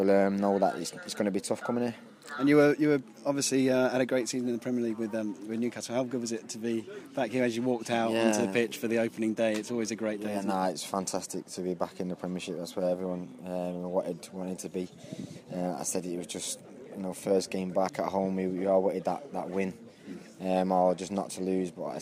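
No technical faults can be heard anywhere in the signal; it runs continuously without interruption, distortion or any other defect in its transmission or processing.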